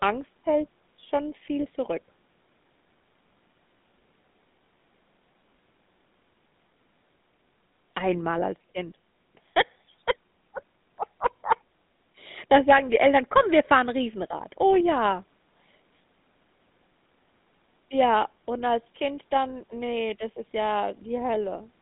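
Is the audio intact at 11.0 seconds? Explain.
No. At 11.0 s, as across the whole clip, the speech has passed through the GSM full-rate codec. The coder models the vocal tract and rebuilds it from a sparse train of regularly spaced excitation pulses, which fits the 13 kbps GSM rate, and nothing above 3.8 kHz survives. The speech sits in a narrow 150 Hz to 3.7 kHz telephone band and carries a plainly audible buzzy, gravelly roughness.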